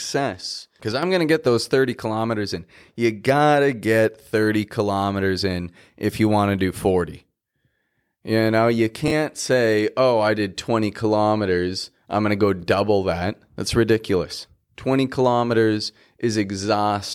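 From 0.92 to 1.03 s, just before "going to get those", the level drops abruptly by about 6 dB for roughly a tenth of a second, then snaps back. The likely cause is one channel dropping out before the mono sum. The waveform shows a brief rectangular step down in the envelope.

At 9.08 to 9.11 s, between "know you" and "say oh I did", and again at 12.60 to 12.63 s, there are chunks out of order. A block about 11.6 ms long plays two blocks late, which fits 512-sample blocks at 44.1 kHz. Each is heard as a tiny jumbled stutter. A spectrogram shows thin vertical broadband lines at the three hard joins.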